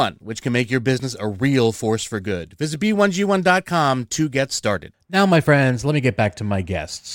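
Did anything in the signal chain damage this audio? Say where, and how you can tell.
No, nothing in this speech recording stood out on listening as damage from any stage of the signal chain.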